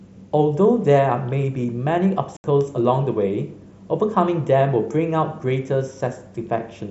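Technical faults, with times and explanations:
2.37 to 2.44 s, unconcealed Bluetooth headset packet loss: a 75 ms hole opens in the speech with abrupt edges, consistent with about ten consecutive voice packets dropped between headset and phone and replaced by silence or an idle pattern rather than patched, over wideband mSBC sound.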